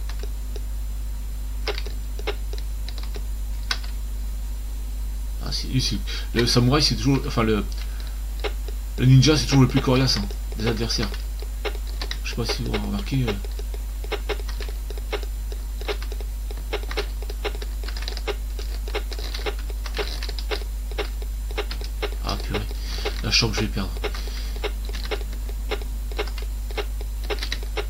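Nothing in this one trips any alarms, so there's simply no fault to point to here.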